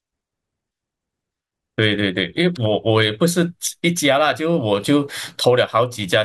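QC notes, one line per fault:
No technical faults can be heard anywhere in this speech recording, so nothing needs correcting.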